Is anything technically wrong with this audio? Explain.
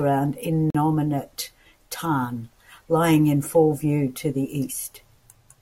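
Yes. At 0.70 s there is a gap between stream segments lasting about 43 ms, until 0.75 s. The timestamps of two adjoining segments of the stream don't meet, so the player fills the missing span with silence. The speech breaks off abruptly and resumes with hard edges, and nothing is lost.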